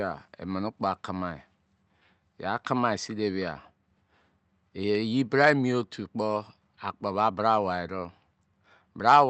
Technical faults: none

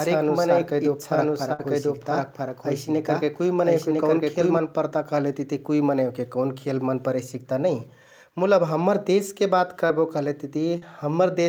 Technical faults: doubled audio track; burst of packet loss; short concealed packet loss

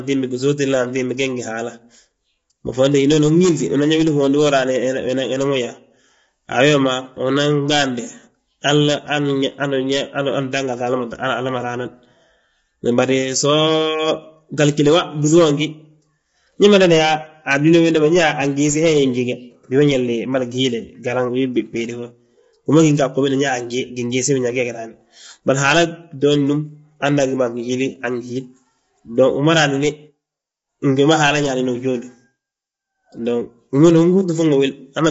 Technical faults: low-delay AAC compression

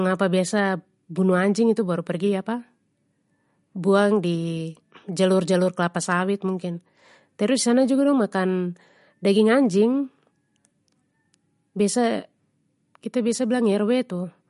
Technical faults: MP3 compression

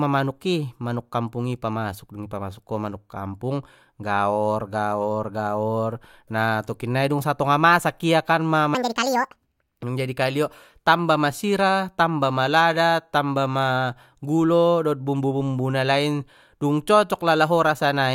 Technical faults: section at the wrong speed

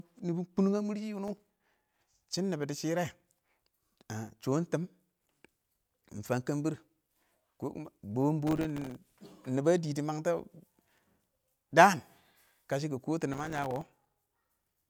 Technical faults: processor overload crackle

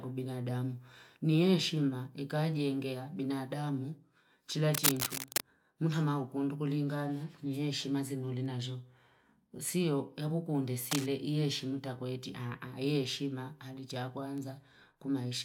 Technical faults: cable scratch noise

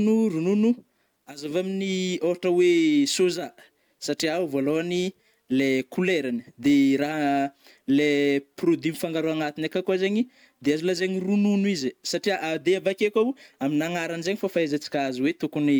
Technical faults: none

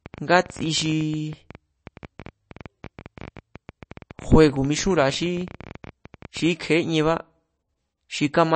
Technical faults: MP3 compression; train of clicks

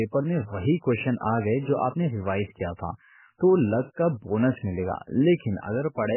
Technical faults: MP3 compression

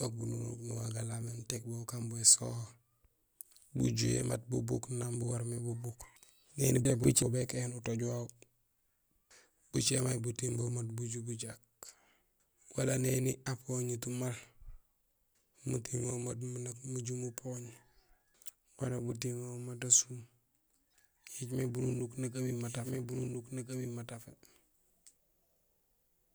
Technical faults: frames out of order; doubled audio track

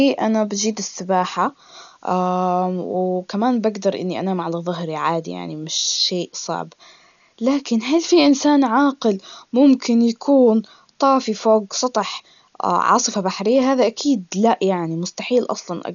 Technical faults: Dolby Digital compression

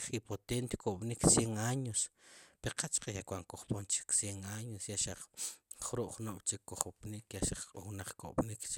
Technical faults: none

